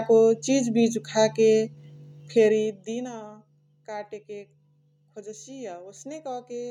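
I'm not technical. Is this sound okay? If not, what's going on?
Yes, this sound is okay, and nothing is going wrong in it.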